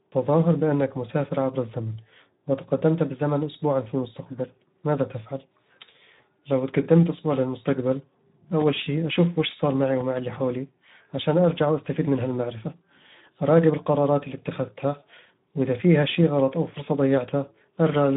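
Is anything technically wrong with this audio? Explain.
Yes, there are two faults.

Speex codec, throughout: the speech has plainly audible codec damage, sounding noisy and hoarse, which fits Speex at roughly 11 kbps. This CELP coder leaves too few bits to model the excitation signal faithfully, so it is replaced by a coarse approximation.

VoIP packet loss concealed by the speech codec, 6.15 to 6.21 s, just before "لو تقدمت أسبوع للمستقبل": a brief fading smear, consistent with one lost 20 ms frame. The decoder extended its last pitch and filter at falling gain, and the distortion lingers briefly afterwards.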